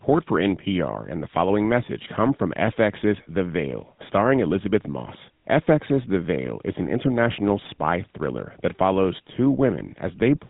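From start to finish the speech has that buzzy, gravelly GSM full-rate codec roughness, consistent with the 13 kbps mode. Nothing gets through above about 3.8 kHz.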